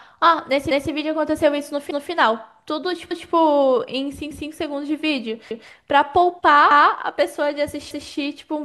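Speech with overlapping chunks: at 0.71, 1.91, 3.11, 4.31, 5.51, 6.71 and 7.91 s, about 200 ms of audio plays twice, heard as a stutter at each join. The audio was cut into chunks each carrying 1.0 s of new audio and each beginning 200 ms before the previous one ended, so the doubling recurs every 1.2 s. Unlike dropouts or buffer underruns, nothing is missing. A short piece repeats at a steady, clock-like interval.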